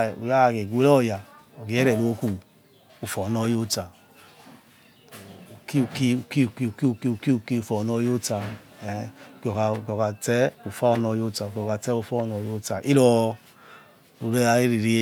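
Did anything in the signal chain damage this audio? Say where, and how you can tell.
No, nothing along the chain from capture to playback has left any audible damage on this speech recording, so there's no stage to point to here.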